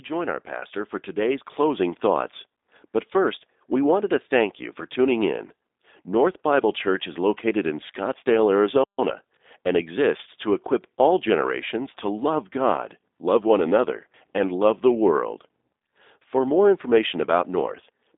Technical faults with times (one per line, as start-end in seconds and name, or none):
0.00-18.18 G.729 codec
8.84-8.98 playback stall
8.98-10.44 time-compressed catch-up